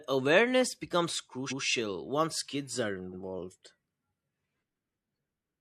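At about 1.47 s there's a stutter from repeated frames: the 128 ms block running to 1.60 s plays twice, which fits a run of about three compressed frames being sent again. The speech runs 128 ms longer.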